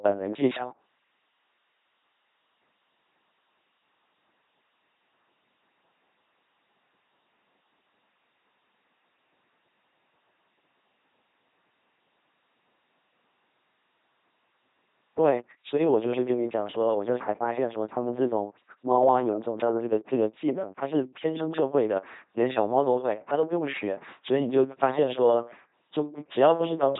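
Throughout the speech, an LPC-10 vocoder at 2.4 kbit/s heavily replaces the voice with a buzzing, mechanical robot sound. Each moment is rebuilt from a pulse train or noise through a short vocal tract filter, so voicing errors become buzz or hiss. Nothing remains above about 3.9 kHz.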